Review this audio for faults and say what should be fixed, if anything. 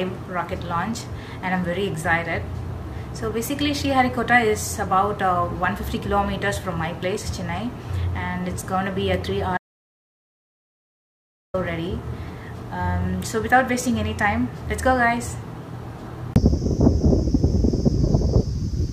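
The input path most likely lost its connection or was muted while recording continued and wrote zeros, producing an audio dropout to silence from 9.58 s to 11.54 s. For about 1.96 s the sound cuts off abruptly into total silence with no room tone, then resumes mid-flow, and whatever occurred in that gap is lost. To prevent it, secure the cables and wireless link and monitor input levels during capture, so any loss of signal is caught and the take repeated.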